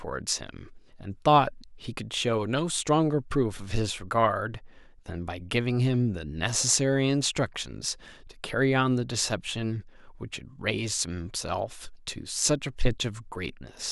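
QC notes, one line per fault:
No faults heard.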